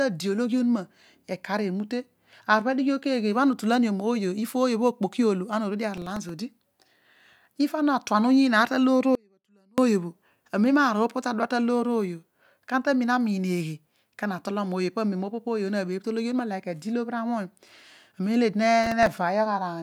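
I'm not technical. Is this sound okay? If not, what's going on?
No. Processor overload crackle, at 5.97 to 6.29 s and again at 18.83 to 19.07 s: the computer fell behind, repeating tiny snippets of old audio, which sounds like gritty crackling.

Audio dropout to a faint residue, at 9.15 to 9.78 s: the speech suddenly vanishes for about 0.6 seconds, leaving only a faint trace, likely because the signal was lost while the equipment after it kept running.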